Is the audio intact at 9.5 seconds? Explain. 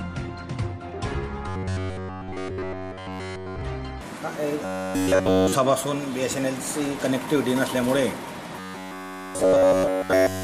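No. At 9.5 seconds you're in the middle of a stretch of robotic sound from repeated short buffers, running from about 8.56 s right to the end at 10.44 s. It's a rigid, metallic buzz locked at 93.8 Hz, so a chunk about 10.7 ms long is being looped over and over, and essentially none of the real audio gets through. The likely cause is new audio arriving too slowly, with the playback filling the gaps by repeating its last short buffer.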